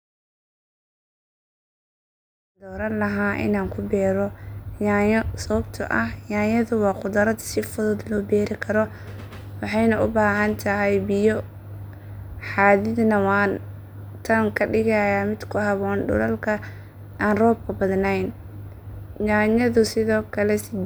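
Speech recording with no technical faults, its level fading in smoothly from around 2.5 s to full level at 3.18 s, with no click or hard edge.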